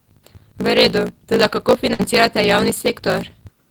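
A speech recording with a block size mismatch (truncated) throughout: block tails are discarded, giving a 54.4 Hz buzz and speech running 1.16 times fast with its timbre kept, consistent with 1024-sample blocks cut short. A spectrogram shows regular vertical seams at that rate, and the waveform shows periodic jumps. A burst of packet loss from 1.93 to 2.01 s fills about 55 ms with a fading held sound, and then speech resumes with roughly 60 ms missing. This appears as a smeared, decaying band followed by an abrupt waveform step.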